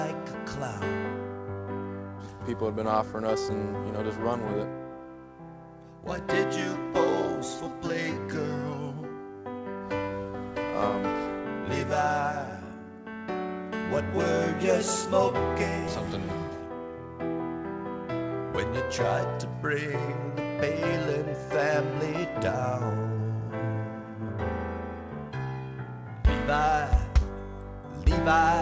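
Nothing stood out on listening, and the sound carries the narrower top end of a call link that passes nothing above 8 kHz, which fits a G.722 connection working as intended.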